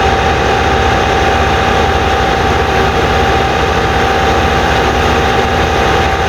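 Nothing stood out on listening to this recording of sounds.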